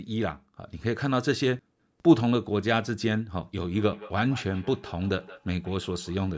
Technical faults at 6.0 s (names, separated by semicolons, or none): feedback echo between two devices